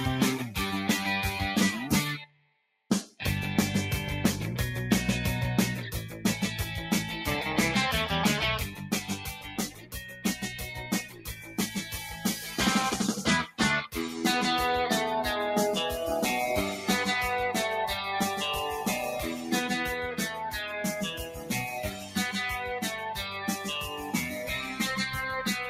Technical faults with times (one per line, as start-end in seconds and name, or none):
0.00-25.69 noise suppressor applied to music or sounds
2.19-2.90 sound cut by the noise suppressor
8.72-12.57 sound cut by the noise suppressor
21.11-22.17 sound cut by the noise suppressor
23.19-24.80 sound cut by the noise suppressor